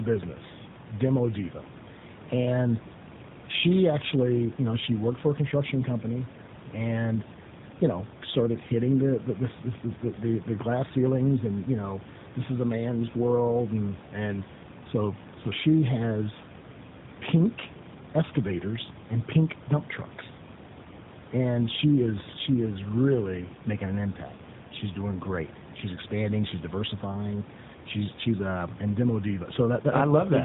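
Tandem speech coding runs the whole way through. The speech seems to pass through two speech coders, likely GSM full rate then AMR-NB, so it's rough, muffled and warbly, with nothing above 3.8 kHz. Room noise sits about 18 dB below the speech.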